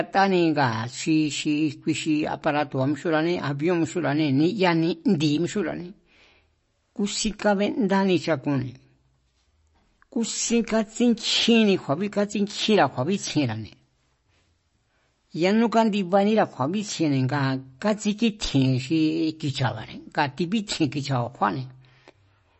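From start to finish the speech carries MP3 compression damage, plainly audible throughout. Nothing reaches above 8 kHz, so the top octave is gone and the sound is dull and closed in. The encoder was likely starved of bits, which fits a bitrate near 33 kbps. Weak frequency lines drop in and out between frames. That gives a watery, swirling texture. S sounds chirp metallically, and sharp onsets smear.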